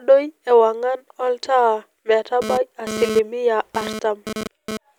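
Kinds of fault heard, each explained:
GSM phone buzz: a nearby 2G handset bursting 217 times a second is rectified by the audio circuit, giving a raspy buzz about 8 dB below the speech from 2.42 to 4.77 s, coming and going with data traffic; spectrograms show stacked 217 Hz harmonics, waveforms sharp pulse trains.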